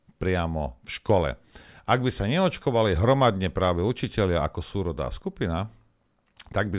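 No technical faults can be heard anywhere in this speech recording; the signal stays intact and continuous throughout.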